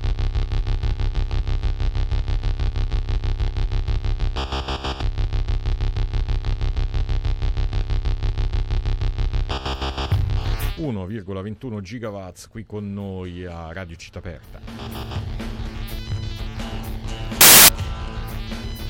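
From 17.41 to 17.68 s, samples are built from the wrong bytes: the reader assembles each sample's bytes with an offset, swapped order or wrong alignment, so the rapidly changing low bits become the bulk of each value. The result is a burst of loud, harsh broadband noise.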